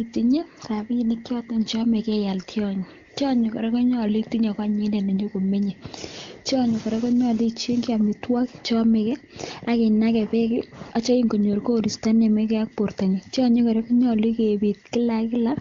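No technical faults are audible in the speech, which comes through the AMR wideband (HD Voice) codec at what sounds like its top rate of about 23.85 kbit/s.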